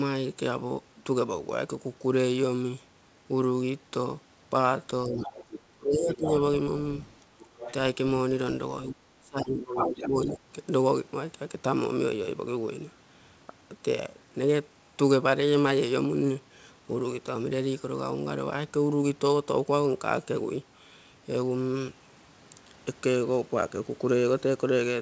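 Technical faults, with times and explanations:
5.05–10.39 s, speech suppressed in double talk (5.05–5.34, 5.72–6.36, 7.37–7.50, 8.89–10.39 s): with both sides talking at once, the echo canceller likely mistook the near talker for echo and attenuated everything, so the speech dips by about 15 to 30 dB, deepest and longest in the final 1.5 s stretch.
5.21–10.08 s, other side's voice leaking through (5.21–5.61, 6.13–6.30, 7.42–7.73, 9.76–10.08 s): the loudspeaker echo was likely not fully cancelled, so a second voice surfaces under the speech, about 10 to 15 dB down at first and roughly level with it in the last burst.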